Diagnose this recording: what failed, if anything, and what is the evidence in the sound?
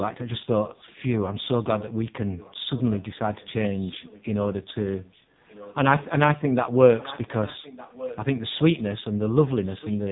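The speech sounds buzzy and synthetic all the way through, with a hard ceiling at 3.8 kHz and nothing above it. This is codec-stage damage from the AMR narrowband mobile codec. It samples at 8 kHz and rebuilds the voice from a vocal-tract model excited by a few pulses in each 5 ms subframe. The heavy coarseness points to one of its lowest modes, around 5.9 kbps, where too few bits remain to carry natural texture.

From 2.23 to 6.06 s, and again from 6.98 to 8.83 s, a faint trailing copy of the talker follows the live speech about 1.2 s late. It sits roughly 20 dB below the speech in the first stretch and about 15 dB below in the second, so it is more audible later. This is likely an echo leak in the call-processing stage: a far end on loudspeaker whose echo canceller let some of its microphone pickup return down the line.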